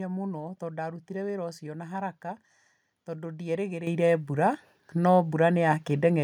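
At 3.87 s the microphone volume stepped up by about 8 dB in one jump, lifting speech and background together, unlike a compressor, which would ease in rather than step.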